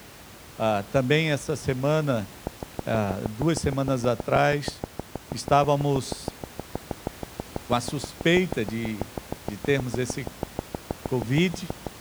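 From 2.47 s, right after "também essa semana", a steady ticking rides over the speech until 11.88 s, about 6.3 clicks per second, evenly spaced and alike in shape. That comes to some seventy clicks, peaking around 15 dB above the speech and plainly audible in the pauses, where the room noise sits about 20 dB under the voice. This train of clicks is likely interference from nearby equipment or a faulty connection or power supply injecting pulses.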